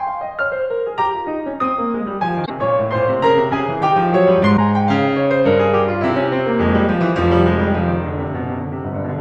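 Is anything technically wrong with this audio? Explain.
Yes. Damaged data in a compressed stream hits this music twice, from 2.42 to 2.50 s and from 4.53 to 4.59 s. At each point some of the encoded bytes are wrong, so the decoder misreads or rejects those frames, loses its place in the stream and hunts for the next valid frame header before playback recovers. Each event is heard as a short chirp, squawk, click or short hole, lasting about 80 ms and 60 ms respectively, that cuts across the music.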